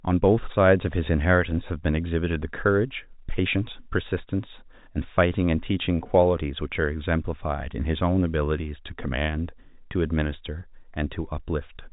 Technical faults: none

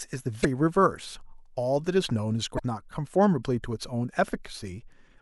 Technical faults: damaged data in a compressed stream

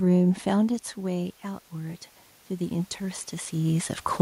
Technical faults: automatic gain rising

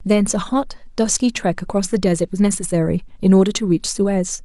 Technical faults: none

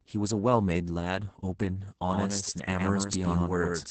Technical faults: Opus voice compression; doubled audio track

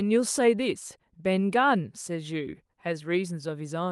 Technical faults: none

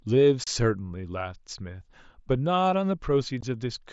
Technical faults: unconcealed Bluetooth headset packet loss

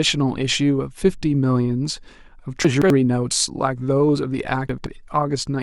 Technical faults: chunks out of order

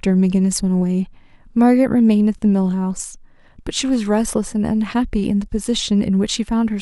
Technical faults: none

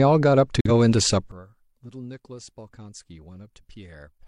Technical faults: corrupt frame muted; one channel inverted

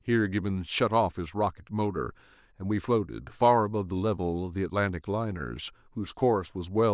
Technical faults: none

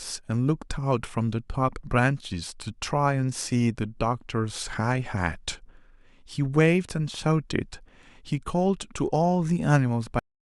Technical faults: cut-off end

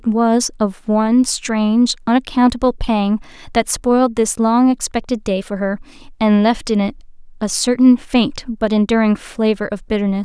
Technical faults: none

